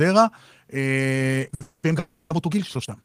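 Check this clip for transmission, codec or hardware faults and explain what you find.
Three kinds of fault are audible, all from 1.38 s onward.

Time-stretched section, from 1.38 s to the end: the pace jumps to about 1.51 times normal speed while the pitch stays put. This is likely software squeezing the audio to fit a shorter length, holding pitch by dropping short slices rather than resampling. Because those slices are discarded, the sped-up speech sounds rushed.

Short stall from a late packet, from 1.54 s to 1.62 s: a packet failed to arrive on time, and the jitter buffer emptied. The receiver bridged the hole by extending the last bit of sound for about 60 ms, then resumed exactly where it had stopped. Nothing is lost, but one sound lingers unnaturally long, carrying a slight buzz or dip as the repeated material is stretched to fill the wait.

Call audio freeze, from 1.62 s to 1.85 s and from 1.99 s to 2.32 s: the audio locks up for about 210 ms and then about 310 ms. 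The likely cause is packets delayed in transit, draining the jitter buffer, so the receiver keeps extending the final sound as a fading buzz or hiss. Neither wait drops fully to silence. When playback resumes it picks up where it left off, adding gaps without removing any content.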